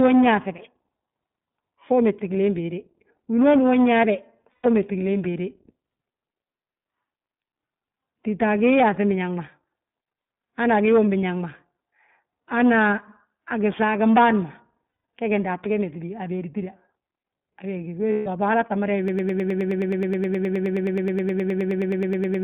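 The whole clip passes through the iLBC codec. The band runs only from about 150 Hz to 3.6 kHz, and the speech has a plainly audible rough, synthetic edge, consistent with iLBC's 20 ms frame mode at 15.2 kbps.

Lost iLBC frames occur at 4.52 to 4.66 s (120 ms), 14.88 to 15.04 s (160 ms) and 18.12 to 18.28 s (140 ms). In each gap, the decoder repeats the last pitch cycle with added noise, giving a brief held, buzzy vowel before normal speech resumes.

From 19.08 s to the end, a broken-record loop takes over. A 105 ms fragment repeats exactly, back to back, about 32 times, and the speech that belonged there is gone. This is likely a stalled player or stream resending its last held buffer.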